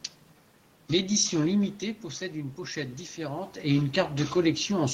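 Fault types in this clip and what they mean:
Automatic gain rising: from 1.8 s to 3.83 s the speech and the room noise behind it swell up together, slowly, over about two seconds, so the background grows along with the voice. The level reaching the microphone had dropped by about 9 dB, shortly after the talker moved away, and the automatic gain control answered by gradually raising its gain by about 3 dB, lifting everything rather than the voice alone.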